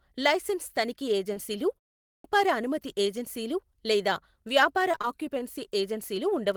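At 1.33 s, just after "లైసెన్స్ తనిఖీ", there is a short concealed packet loss lasting about 40 ms. A small piece of the call arrived too late for the decoder. The receiver covered the hole by stretching the last sound forward, then blended back into the real signal. About 20 ms of that span is patched sound. You hear it as a quick smear or tiny wobble, not a clean gap.

At 2.01 s comes a clipped start after a pause. The sound before it had stopped for about 0.3 s, and the output device slipped into an idle state. It needed time to wake up again. The first 233 ms of the next phrase, "అనుమతి ఏజెన్సీలు లేదా వ్యాపార", never reach the ear. That phrase begins abruptly out of silence, with its opening sounds missing.

From 4.91 to 5.05 s, right after "అనుమతి ఏజెన్సీలు లేదా వ్యాపార", there is repeated packet loss with a robotic sound. Several short holes arrive in quick succession. The longest lasts about 17 ms. 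Each one is patched by continuing the last sound, and the next hole follows almost at once. About 41 percent of this stretch is filled-in material. It comes out choppy, with small pieces gone.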